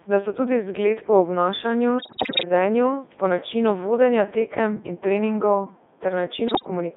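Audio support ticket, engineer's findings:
Codec 2 vocoder, whole clip: speech robotic and buzzy, band limited to roughly 250 Hz to 3.6 kHz, heavy artefacts. Decoder rebuilds voice from sine waves using only pitch, voicing, energy and spectral envelope; waveform not preserved. Sound fits the 3.2 kbit/s mode.

Bit errors on digital voice radio, 1.98 to 2.45 s and 6.48 to 6.70 s: sudden pitch, level and timbre jumps, bleeps and warbling gibberish. Corrupted bits hit frame-level parameters, roughly 15% then 10% of bits wrong, worse in the first burst.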